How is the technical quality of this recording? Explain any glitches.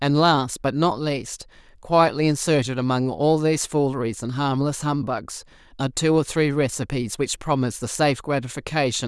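I hear no glitches or technical faults anywhere.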